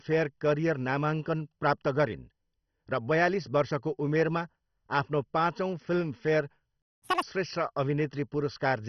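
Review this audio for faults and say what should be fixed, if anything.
Throughout the speech, the sound is dull and gurgling, with granular distortion. This is likely heavy MP2 compression starving upper sub-bands, which fits roughly 32 kbps. Encode at a higher bitrate or use a more efficient codec.

From 6.82 to 7.02 s the speech cuts to silence for about 0.2 s. This playback stall is likely the player running out of data. Enlarge the playback buffer and keep the audio thread from being blocked.

From 7.02 to 7.22 s the speech rushes at double speed and jumps up roughly ten semitones. This is catch-up at higher speed, with the backlog resampled to recover lost time. Recover from stalls with pitch-preserving time-stretching or by dropping the backlog.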